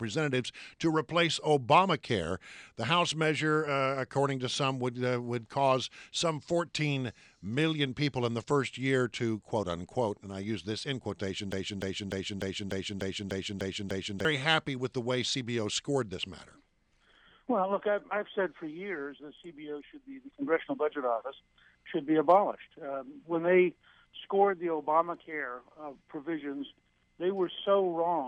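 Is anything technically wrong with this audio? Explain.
Yes. From 11.52 to 14.25 s a broken-record loop repeats one 0.30 s fragment nine times back to back, likely from a stalled player or stream resending its last buffer, so the audio there is lost. Waveform and spectrogram show identical blocks tiling, with seams every 0.30 s.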